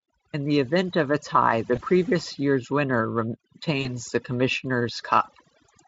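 Overdone noise removal runs through the whole speech clip. Frequency bands near the noise floor are cut away, leaving the voice over twinkling near-silence. At 1.75 to 1.82 s and 3.81 to 3.90 s comes VoIP packet loss concealed by the speech codec. The decoder extrapolates a fading buzzy tone or coloured noise, which fits one and then two lost 20 ms frames, and the voice stays weak briefly afterwards. The Speex coding itself adds little audible damage.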